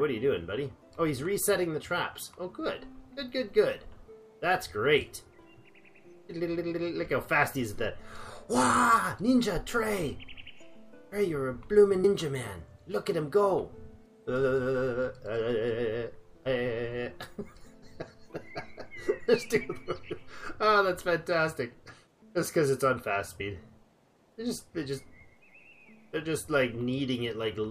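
The audio has compressed frames skipped at 12.03 s, 20.18 s and 23.40 s. It jumps forward by roughly 150 ms, 50 ms and 30 ms, whole multiples of a 26.1 ms frame.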